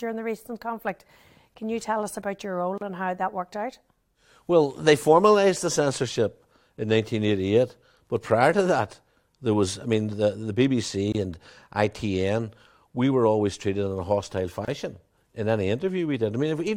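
At 2.78, 11.12 and 14.65 s, after "us about your role", "I mean the the" and "treated in a hostile", speech drops into 24 to 33 ms silences with smeared edges. These are gaps at joins of encoded pieces, where leftover encoder delay and padding were never trimmed.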